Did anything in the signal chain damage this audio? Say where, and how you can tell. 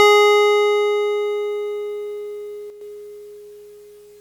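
Yes. From 2.70 to 2.81 s the music drops abruptly by about 6 dB, then returns to its previous level after roughly 110 ms. The dip is flat and sudden rather than faded, which suggests one channel dropping out, likely from an intermittent connection in the analogue wiring. With one side of the stereo pair silent, the mono sum keeps only half of the shared material, and anything panned solely to the lost side vanishes for that interval.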